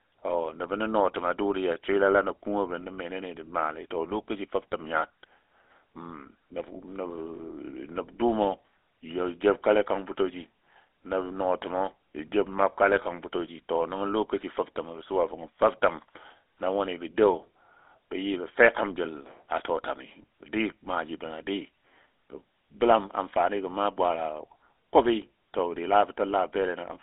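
Across the whole speech clip the GSM full-rate codec is plainly audible. It models the vocal tract as a filter and drives it with a sparse, regularly spaced pulse excitation, which gives the voice a buzzy, gravelly roughness. The band runs from roughly 300 Hz to 3.6 kHz, so there is no low body or upper air. The character fits the 13 kbps full-rate GSM codec.

From 7.36 to 7.40 s there is a lost GSM frame. The decoder concealed the gap by repeating the parameters of the last good frame rather than leaving silence. The result is a brief rough, metallic ring where the sound should have continued, short enough to register as a momentary glitch. Its length fits a single 20 ms frame.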